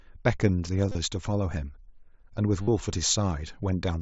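Concealed Bluetooth headset packet loss appears at 0.86–0.95 s and 2.63–2.68 s in this speech. Lost headset packets were filled by repeating the best-matching recent stretch of waveform, so gaps, with runs of up to 30 ms in the first event, become a brief buzzy hold with a slight warble on recovery.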